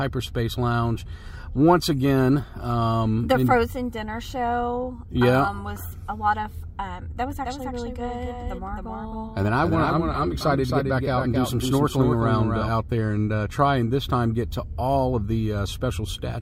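The audio carries a doubled audio track from 7.31 to 12.69 s: a second, full-band copy trails roughly a third of a second behind, about 5 dB quieter. Unlike an echo, it has no decay or room colour and switches abruptly on and off, likely from a slower second capture path.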